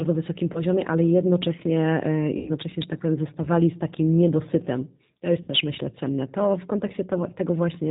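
Speech clip carrying plainly audible G.729 codec damage throughout: band-limited below 4 kHz with a rough, synthetic texture, which fits 8 kbit/s G.729A. VoIP packet loss concealed by the speech codec appears at 0.53–0.61 s, 2.37–2.50 s and 5.42–5.50 s, where gaps of 20, 100 and 60 ms are filled with a fading extrapolation of the last voice, and the voice stays weak until the decoder recovers.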